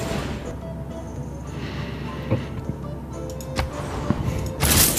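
At 0.51 s the sound jumps abruptly, skipping about 150 ms. A shorter skip follows at 1.16 s, losing about 50 ms. At 2.65 s another jump drops about 150 ms. At 4.18 s a final jump removes about 50 ms. There is no silence at any of these points. The two sides simply butt together. The likely cause is a dropped buffer (overrun), where the hardware overwrote samples before the program collected them.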